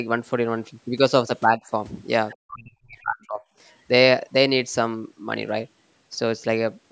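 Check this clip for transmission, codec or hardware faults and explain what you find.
Two kinds of fault appear, both tied to the call's echo canceller. The audio stops at 8 kHz, which is simply the call path's normal bandwidth.

Speech suppressed in double talk, at 1.56 to 1.61 s and 2.36 to 3.44 s: the speech dips briefly by about 10 dB, then sinks by about 40 dB for roughly a second. This is likely the canceller ducking the talker while the far end was also active.

Other side's voice leaking through, at 2.3 to 2.37 s: a faint scrap of a second voice sits well below the talker, likely loudspeaker echo the canceller failed to remove. It is a different voice rather than a smeared copy of the talker, which rules out room reverberation.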